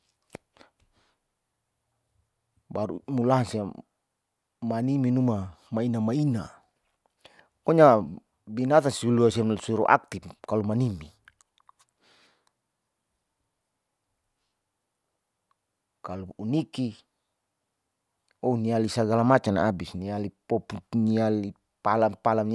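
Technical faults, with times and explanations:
No technical faults are present.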